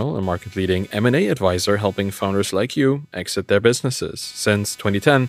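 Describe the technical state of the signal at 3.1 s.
At 3.1 s the speech carries computer activity noise, as it does for the whole clip. Changing load on the computer's processor, graphics card or mouse shifts the ground shared with the audio circuit. That shift leaks into the signal. It is heard as a buzzing, chirping texture pulsing at around 300 Hz. It sits roughly 30 dB below the speech. It follows the machine's activity, not the talking.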